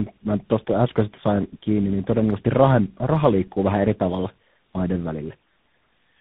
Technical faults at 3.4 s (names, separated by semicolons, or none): tandem speech coding